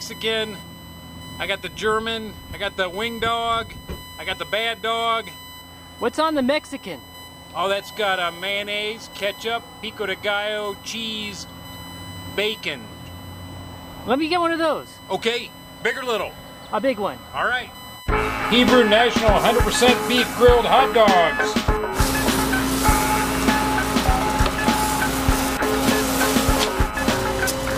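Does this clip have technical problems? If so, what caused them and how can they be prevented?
Yes. Current drawn by the USB bus in regular 1 ms frames has leaked into the audio path through shared power or ground. This produces USB whine, a fixed-pitch tone at 1 kHz that runs through the whole clip, with its strongest component at the third harmonic, 3 kHz. It sits roughly 20 dB below the wanted sound. To prevent it, power the interface separately or use a USB isolator or ground-loop isolator, and keep audio cabling away from the USB line.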